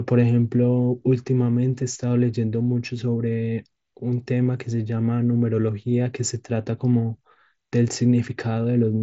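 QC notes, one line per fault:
No faults were heard in this speech clip. It carries the band-limited sound of a Bluetooth mSBC headset codec, with nothing above about 7.7 kHz and only light coding grain, which fits the wideband headset link working as intended.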